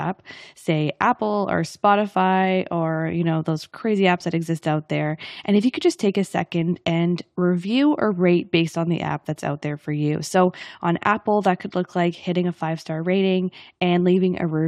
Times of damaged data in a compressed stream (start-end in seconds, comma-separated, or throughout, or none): none